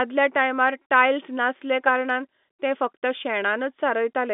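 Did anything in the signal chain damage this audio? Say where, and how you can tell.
No, the chain left this speech intact: it carries the narrow band of a fixed-line telephone channel, roughly 150 Hz to 3.6 kHz, which fits ordinary 64 kbps G.711 mu-law telephone coding working as intended.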